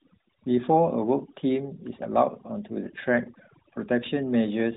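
Overdone noise removal runs through the whole speech clip. The reduction was set too strong, so bands near the noise estimate are pulled far down. The background drops and breaks up into twinkling specks. Quieter speech goes too. The phone-band codec cuts everything above 3.8 kHz, which fits a 12.2 kbps AMR-NB setting.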